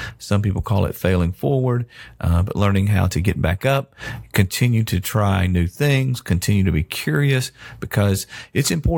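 No technical faults can be heard anywhere in the recording, and the signal stays steady and continuous throughout.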